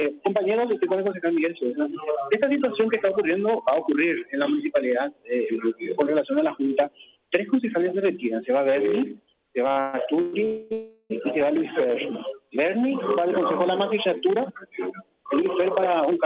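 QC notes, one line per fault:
9.68–10.35 s, repeated stalls (stutter): packets kept reaching the receiver late, so its jitter buffer emptied four times in under 0.7 s. Each time, the last sound was stretched to cover the wait, the longest about 125 ms. Nearly half the span is filled this way, so the audio drags and stutters, though nothing is lost.
10.45–10.73 s and 10.73–11.12 s, call audio freeze: two back-to-back holds, of 260 ms and 374 ms, where the sound is continued as a fading buzz or hiss rather than dropping to silence. The likely cause is delayed packets leaving the jitter buffer empty. Playback then resumes where it stopped, so the gaps add time rather than remove any audio.
14.29–16.25 s, jitter buffer speed-up: late packets had built up extra delay in the buffer, and the receiver clawed it back by cutting many short pitch-period slices, roughly 150 ms in all. The audio runs at about 107% speed, so this last stretch sounds hurried while the pitch stays the same. 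All of this sits on the narrow G.711 call sound, with nothing above 4 kHz.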